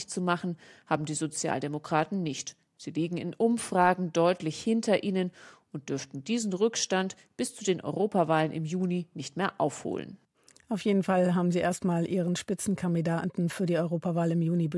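No technical faults can be heard anywhere in the recording.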